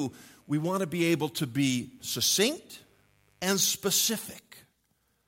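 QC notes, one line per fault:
0.0–3.7 s, mains buzz: a faint, raspy 50 Hz buzz sitting well under the speech, switching spikes twice per cycle spraying harmonics up into the kHz range.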